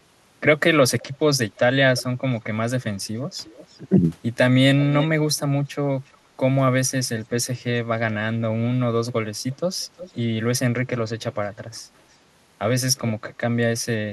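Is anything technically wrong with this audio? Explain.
Yes. An echo leak is the likely cause of faint repeats: on one side the call is probably playing through a loudspeaker, and that side's echo canceller lets part of what its microphone picks up slip back into the line. Here the delayed copy of the speech trails by about 355 ms, in short scraps at 1.0, 1.96, 3.47, 4.81, 6.08 and 9.98 s. Most are faint, some barely audible, but the one at 4.81 s comes through clearly at about 10 dB below the speech.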